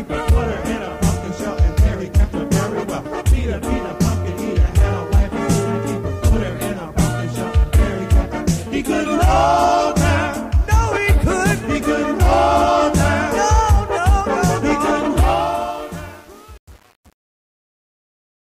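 The fade-out at the end of the audio, beginning around 15 s and ending at 18.6 s, turns gritty and grainy from 15.17 s, worst from 15.33 s to the end. This is truncation distortion on a fade. The fade was computed with too few bits and no dither, which fits a 7-bit stage, so the quiet tail collapses into coarse square steps.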